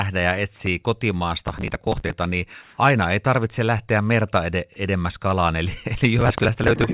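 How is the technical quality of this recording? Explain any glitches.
The recording has two bursts of crackle and one short patch of artificial background, all over a narrowband call path with nothing above 4 kHz, which fits a telephone-grade codec.

Processor overload crackle, 1.43 to 2.13 s and again 6.19 to 6.84 s. The processor fell behind and repeatedly failed to deliver its small audio buffers, each about 5 ms, on time. Dozens of buffers were simply skipped, leaving tiny hard-edged holes. Strung together, those holes sound like a gritty, tearing crackle that rides over the speech for roughly two-thirds of a second each time, then stops abruptly once the load eases.

Comfort noise in place of the background, 2.62 to 2.78 s. For about 160 ms during a pause, the natural background, sitting about 35 dB below the loudest speech, gives way to a smooth, featureless hiss, with the level shifting by only about 1 dB. 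The likely cause is discontinuous transmission: the sender's voice detector judged the pause silent and stopped sending, and the receiver filled the gap with synthetic noise roughly matched to the background.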